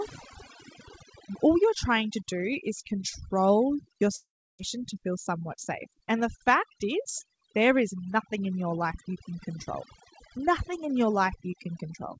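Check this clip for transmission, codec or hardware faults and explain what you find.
The clip is speech carried over a G.722 call path with nothing above 8 kHz, and it shows three faults.

Overdone noise removal runs throughout. The suppressor is pulling individual frequency bands down hard wherever they sit near its noise estimate, taking low-level parts of the voice with them. The background sits near silent with twinkling specks.

From 4.16 to 4.61 s, after "do is control your", the sound breaks up. The last audio is stretched into a fading buzz, then about a third of a second of silence. It resumes at "to feel" with roughly 0.4 s of material gone, the likely cause being a long network dropout.

Jitter buffer speed-up follows from 5.30 to 5.89 s, just after "to feel". With more audio buffered than its target, the receiver trims short pitch-period chunks repeatedly, about 50 ms in total. 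Speech runs at 107% speed with unchanged pitch and sounds hurried.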